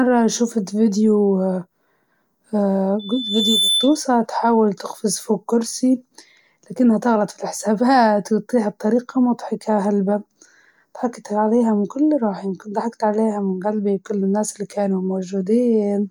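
Loudspeaker feedback squeal cuts into this speech clip from 2.99 to 4.00 s, a single 3.5 kHz tone swelling over roughly 0.7 s to about the level of the voice. The microphone is hearing its own loudspeaker, and the loop gain at that frequency has risen above one.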